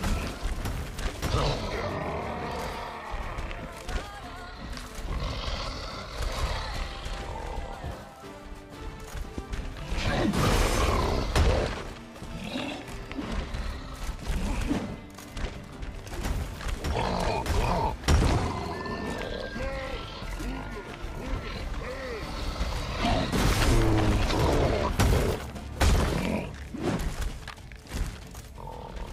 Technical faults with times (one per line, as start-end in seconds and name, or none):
3.28-27.37 clock drift buffer slips